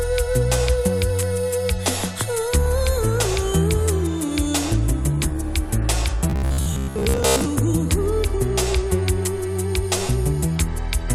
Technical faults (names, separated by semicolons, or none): robotic sound from repeated short buffers